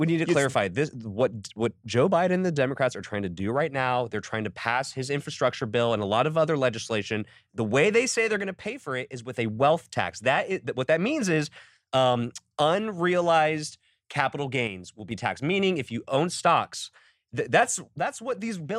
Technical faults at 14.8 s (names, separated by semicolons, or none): one channel drops out